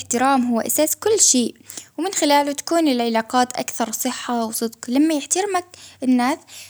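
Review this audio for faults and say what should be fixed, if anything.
Nothing to fix: no faults audible anywhere in the speech.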